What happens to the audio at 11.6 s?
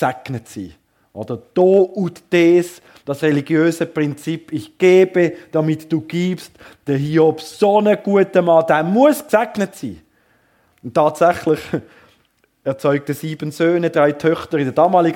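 At 11.6 s the audio carries on intact, with no fault to be heard at that moment.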